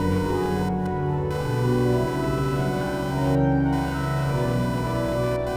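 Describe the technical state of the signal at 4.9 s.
At 4.9 s, computer activity noise runs throughout: changes in computer load shift the shared ground, giving a buzzy chirping near 500 Hz, well below the signal, seen as regular spectrogram stripes.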